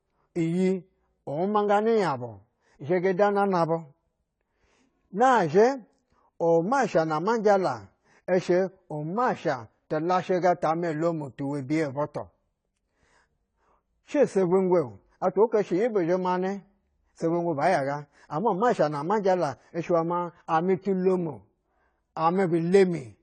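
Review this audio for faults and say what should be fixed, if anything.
Throughout, the speech sounds dull and smeared with a fizzy edge and nothing above 9.9 kHz, likely AAC compression at a bitrate that fits about 24 kbps. To avoid it, re-export from the original source at a much higher bitrate, or skip lossy encoding at that stage entirely.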